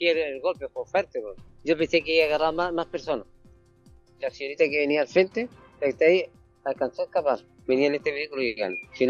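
No technical faults can be heard anywhere in it.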